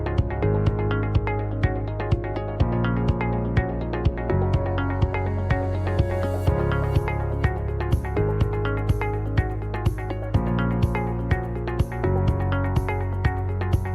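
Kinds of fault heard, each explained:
No technical faults are audible anywhere in this recording.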